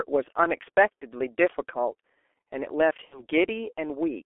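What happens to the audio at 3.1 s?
Around 3.1 s there is VoIP packet loss concealed by the speech codec, from 3.05 to 3.24 s. About 60 ms of audio is missing, which fits two lost 30 ms frames. The decoder fills the gap from its last pitch and filter while lowering the gain, so the sound smears into a fading buzzy tone or coloured noise. It stays weak for a short while after.

Underneath, the G.723.1 codec runs throughout at 6.3 kbit/s. The band is limited to 300 Hz to 3.4 kHz, and heavy coding leaves the speech muffled and hoarse, with blurred consonants.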